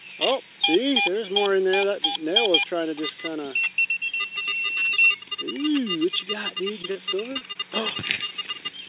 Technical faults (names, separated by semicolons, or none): short concealed packet loss